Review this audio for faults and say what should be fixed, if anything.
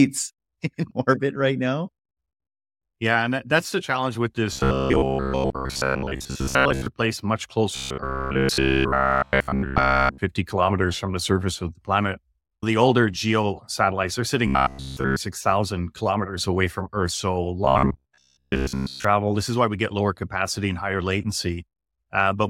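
Audio likely arriving too seldom, with a short stretch replayed to fill each gap, causes robotic sound from repeated short buffers at 4.53–6.86, 7.76–10.18, 14.47–15.18 and 17.65–19.05 s. The speech turns into a rigid, metallic 66.8 Hz buzz, which fits repeats about 15 ms long. It is wholly buzz in the second stretch and mostly buzz in the others. A larger jitter buffer or steadier audio delivery would prevent these repeats.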